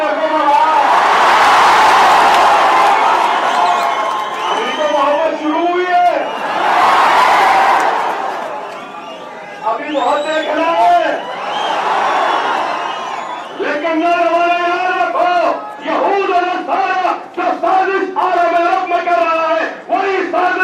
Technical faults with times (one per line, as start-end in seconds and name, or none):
5.15-9.91 call bitrate drop